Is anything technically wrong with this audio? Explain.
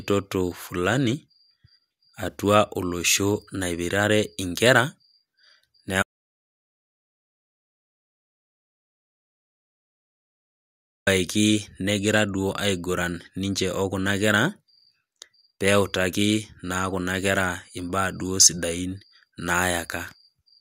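Yes. From 6.03 s to 11.07 s there is an audio dropout to silence: the input was likely lost, through a disconnection or mute, while recording continued writing zeros. The speech cuts off abruptly into about 5.04 s of total silence, with no room tone, then resumes mid-flow.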